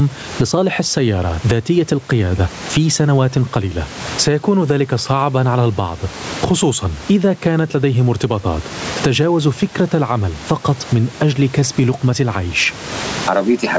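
Speech recorded through call microphone processing, with nothing above 8 kHz, shows gain pumping throughout. The room noise sits about 30 dB below the speech, and the level moves by around 20 dB. The likely cause is input gain set far too high, with a fast limiter clamping down on each peak, which leaves the speech squashed and the loud and soft parts close in level.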